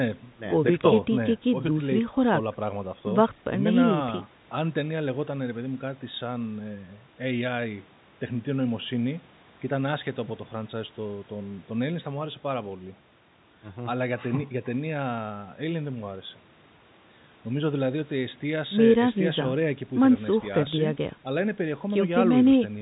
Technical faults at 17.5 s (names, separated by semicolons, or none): none